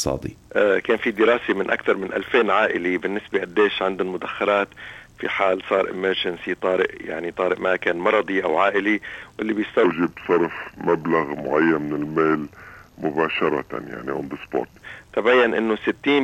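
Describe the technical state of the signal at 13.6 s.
At 13.6 s the signal sits inside a section at the wrong speed, which runs from 9.84 s to 14.81 s. Playback here moves at 0.819 times the original rate, so time and pitch drop together: the sound is stretched and slowed and falls by about three semitones, taking on a heavy, dragging quality. The likely cause is a clock mismatch, with this stretch rendered against a rate different from the one it was captured at.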